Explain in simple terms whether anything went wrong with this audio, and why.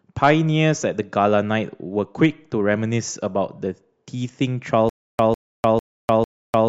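The playback likely stalled from 4.89 s to the end, a stutter with silent gaps: it kept replaying the same 150 ms scrap of speech four times, each followed by about 0.3 s of dead silence, so the rest of the recording is simply lost.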